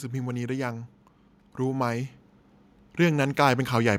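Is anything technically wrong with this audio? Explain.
Yes. From about 2.81 s to 3.95 s the level creeps up by about 5 dB, a case of automatic gain rising. The AGC decided the input was too quiet and slowly raised its gain, so the speech and the background noise swell together over that stretch.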